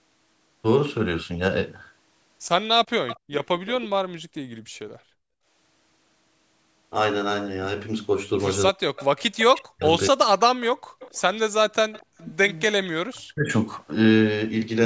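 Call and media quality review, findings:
Echo leak, 3.08–3.86 s, 8.96–9.42 s, 10.60–12.63 s: faint delayed copy of the near-end voice trailing it by 251 ms, roughly 15 dB down in the first, about 20 dB down later. Likely residual echo slipping past the far side's echo canceller. Distinguishing mark: a fixed lag on every instance, unlike room reverb's smeared tail.

Background gated by the echo canceller, 3.20–3.32 s, 4.61–5.49 s, 12.06–12.17 s: room tone dips about 31–32 dB, around 100 ms, 700 ms and 100 ms total, then snaps back. Canceller's suppressor clamping the mic while loudspeaker plays. Unlike a network dropout, only background vanishes, timed to far-end activity, with no gap or glitch in the signal.

Speech suppressed in double talk, 8.70–10.54 s, 12.91–13.52 s: far talker dips up to around 40 dB in pieces, roughly a second and 700 ms affected. Likely the canceller misreading overlapping talk as echo. 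Differs from gating because the voice itself is cut, and only during overlap. The band topping out near 8 kHz is the call path's normal limit.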